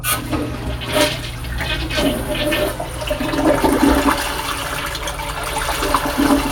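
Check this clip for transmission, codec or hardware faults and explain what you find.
Nothing turned up here, so there's no transmission, codec or hardware fault to report in this sound.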